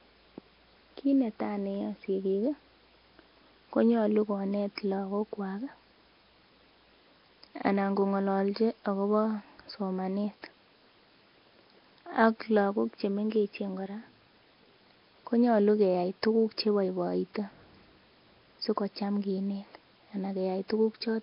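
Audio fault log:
throughout: Nellymoser compression, likely. Heavy damage gives the speech a rough hissy halo and underwater smear, with nothing above 5.3 kHz; empty bands hiss instead of swirling.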